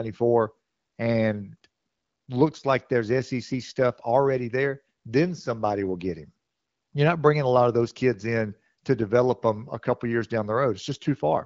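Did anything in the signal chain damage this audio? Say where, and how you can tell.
No, nothing in the signal chain damaged this audio.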